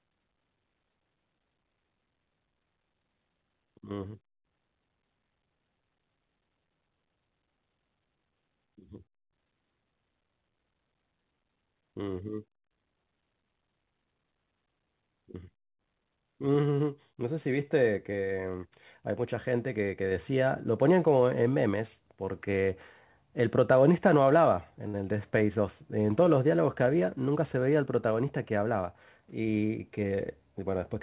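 A speech recording carried over a call link, with nothing above 4 kHz, which fits a narrowband G.711 A-law codec. At 24.88 to 24.96 s there is a short stall from a late packet. A packet missed its slot and the jitter buffer ran dry. The receiver stretched the last sound for 58 ms, then carried on from the same point. Nothing is lost, but that sound lingers too long. From 26.94 to 27.58 s comes a jitter buffer speed-up. The buffer had built up more audio than it aims for. To shed the delay, the receiver cut small pitch-period slices, about 50 ms in all. Speech runs at 107% speed with unchanged pitch, so it sounds briefly hurried.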